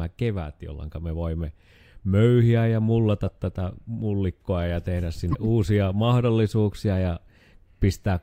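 At 5.32 to 5.35 s, after "tätä mullikkoa ja tehdä", the speech jumps ahead through a 30 ms glitch, likely a broken MP3 bit reservoir: after lost frames, the next frame's borrowed bytes came from the wrong frame. Spectrograms show a brief disruption; the waveform, an abrupt discontinuity.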